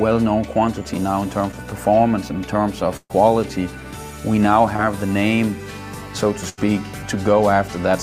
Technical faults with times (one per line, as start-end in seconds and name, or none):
1.51-1.55 short concealed packet loss
2.97-3.13 burst of packet loss
4.76-4.86 short concealed packet loss
6.49-6.59 burst of packet loss